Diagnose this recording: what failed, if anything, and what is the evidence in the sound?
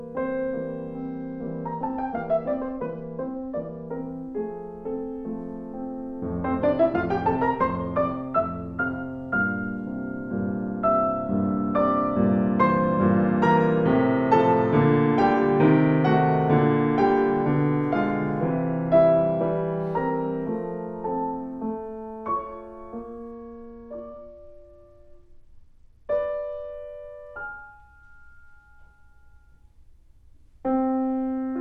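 Bluetooth SBC bit pool drop, 0.97–3.88 s and 23.31–26.73 s: a codec-stage fault. Treble dulls and gritty noise rises in both spans, which fits the bit pool falling from about 28 to 11 (roughly 90 kbps), starving the top sub-bands and coarsening quantisation until the rate recovers.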